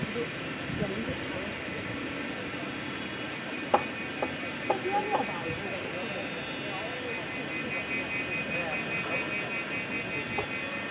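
Nothing is technically wrong with the clip.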